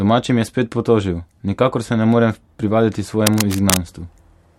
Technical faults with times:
3.27-3.79 cable scratch noise

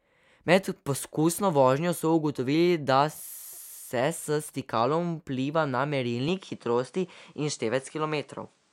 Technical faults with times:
6.28-8.72 input switched to a poorer device

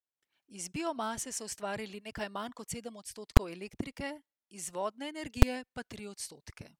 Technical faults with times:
3.37 invalid numbers at full scale
5.42 invalid numbers at full scale

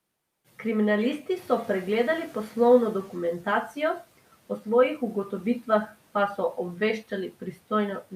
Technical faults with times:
1.36-4.01 noise suppressor catching up

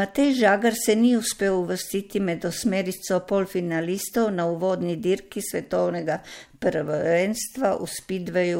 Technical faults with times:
none

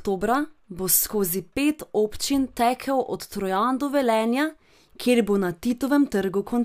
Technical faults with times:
none

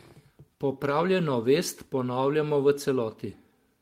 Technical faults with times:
none

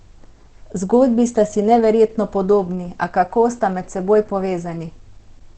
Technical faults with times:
0.00-5.57 Opus compression

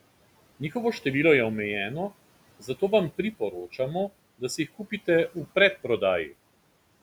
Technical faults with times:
2.60-2.81 speech cut by the noise suppressor

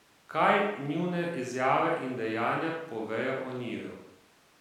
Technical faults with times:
none

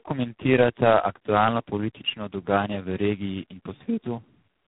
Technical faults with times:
0.00-4.67 tandem speech coding

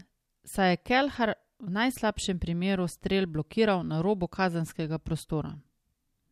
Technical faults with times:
none

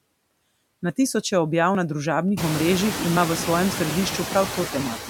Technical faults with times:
0.00-5.10 noise suppressor artifacts

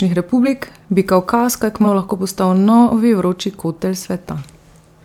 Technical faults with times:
0.44-0.48 compressed frames skipped
1.84-1.86 compressed frames skipped

